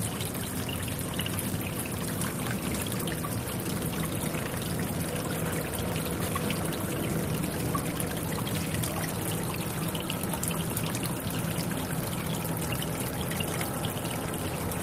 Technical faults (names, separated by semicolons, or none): none